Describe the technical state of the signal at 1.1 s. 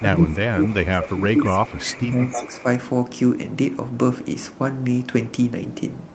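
At 1.1 s the speech sits inside a stretch of speech suppressed in double talk that runs from 0.00 to 2.65 s. The level sags, at its deepest by about 15 dB, adding up to roughly two seconds of attenuated sound. This is likely an echo canceller hearing both ends active at once and, unable to separate the near talker from loudspeaker echo, pulling its gain down across everything.

Overlapping that moment, from 1.01 to 1.18 s, is a brief echo leak: a delayed copy of the speech arriving 316 ms late and sitting about 10 dB below the direct signal. It is short, a scrap rather than a sustained tail, and likely comes from a loudspeaker whose canceller failed to remove all of what its microphone picked up, so the residue was sent back. The call path's 8 kHz bandwidth limit also applies here.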